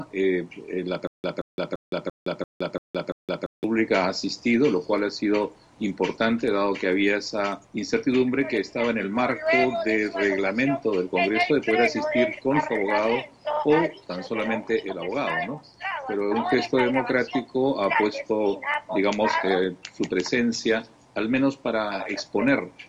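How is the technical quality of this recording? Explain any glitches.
The recording has one clear glitch near the start.

A stutter with silent gaps runs from 1.07 to 3.64 s. The same fragment of about 175 ms plays seven times, each followed by roughly 166 ms of dead digital silence, so the burst returns every 341 ms at a steady, mechanical pace. This is likely a playback or stream stall, with each retry replaying the last buffered piece before running dry. The audio that belonged in that stretch never comes through.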